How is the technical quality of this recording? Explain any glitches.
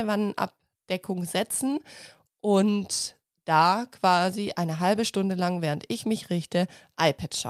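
No glitches or faults are audible.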